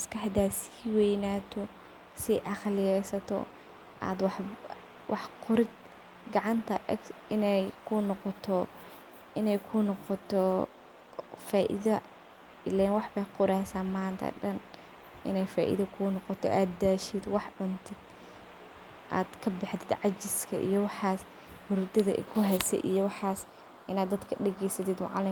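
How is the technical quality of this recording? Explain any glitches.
No technical glitches are audible.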